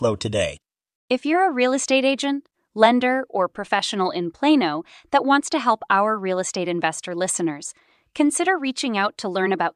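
Speech recording with no audible technical faults present.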